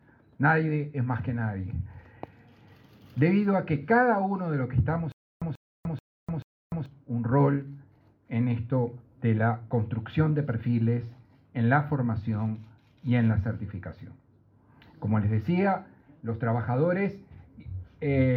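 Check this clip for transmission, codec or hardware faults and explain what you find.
Stutter with silent gaps runs from 5.12 to 6.86 s. Playback likely stalled and replayed its last fragment at each retry. A 0.14 s burst repeats four times, each followed by 0.30 s of digital silence, so the audio due there is lost.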